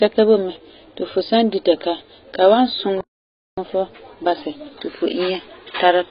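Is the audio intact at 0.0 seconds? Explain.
No. From 0.0 s and through the whole clip, the speech has likely been squeezed through heavy AAC compression at a very low bitrate, around 16 kbps. Nothing remains above 5.2 kHz, so the voice sounds dull and smeared, with a warbly, fizzy edge on sibilants.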